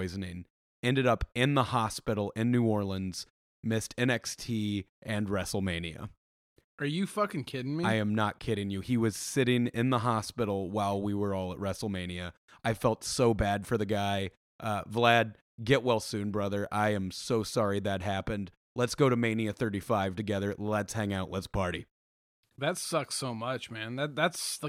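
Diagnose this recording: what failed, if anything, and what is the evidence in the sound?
Nothing failed here as far as I can hear; the speech comes across steady and intact, with no sign of trouble at any stage of the chain.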